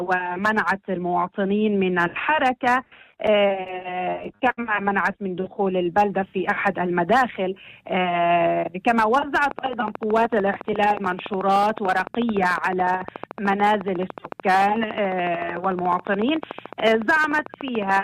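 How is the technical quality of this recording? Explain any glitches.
The recording has three distinct glitches, all from delivery or likely interference rather than the source itself.

Repeated stalls (stutter), 3.68 to 4.59 s: late packets emptied the jitter buffer seven times, so the receiver stretched the last sound, up to 59 ms per gap. The result is a dragging stutter with nothing missing.

Jitter buffer slow-down, 5.41 to 6.10 s: to rebuild its reserve, the receiver repeated short stretches, adding 67 ms. The audio slows to 91% speed at unchanged pitch.

Train of clicks, 9.51 s to the end: regular pulses arrive about 13.7 times per second, peaking about 10 dB above the sound, likely from interference by nearby equipment or a faulty connection or power supply. They tick steadily, even through pauses.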